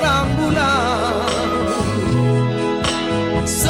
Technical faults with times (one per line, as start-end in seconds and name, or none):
none